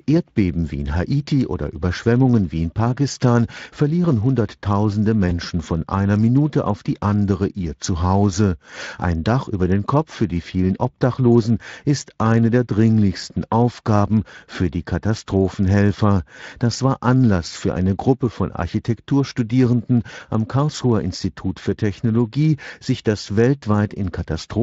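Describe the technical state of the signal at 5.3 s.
At 5.29 to 5.33 s the stream suffers VoIP packet loss concealed by the speech codec. A gap of about 20 ms, which fits a single lost Speex frame, left the decoder with nothing to play, so it carried forward its last pitch and vocal-tract filter at falling gain. The result is a brief buzzy or noisy, smeared patch where the voice thins, with weakness lingering just after, over Speex coding at roughly 24 kbps with light codec damage.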